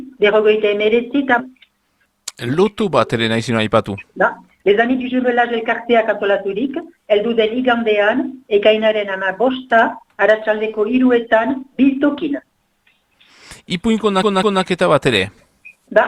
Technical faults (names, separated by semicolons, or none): skip ahead; jitter buffer speed-up; CD stuck on one turn